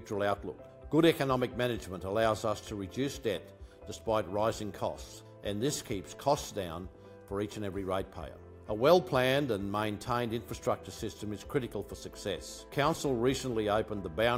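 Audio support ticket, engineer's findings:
Nothing stood out on a listen through this one, so there's no problem in the audio to chase down here.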